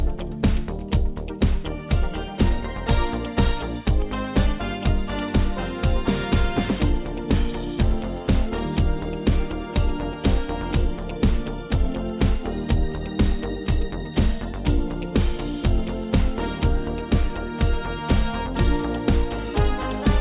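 Nothing stood out on listening to this audio.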